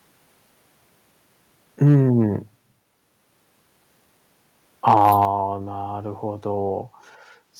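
From 1.82 to 1.96 s, the loudest speech turns harsh and crackly. The peak tops sound flattened. It returns from 4.87 to 5.24 s. This is microphone overload, likely from input gain set too high. Peaks go about 2 dB, then about 4 dB, past the converter's limit.

At 5.25 s, speech and background drop together by 6 dB in a single step. This is the microphone volume stepped down. It comes right after the second distorted burst. Call software likely lowered the device's input level in response.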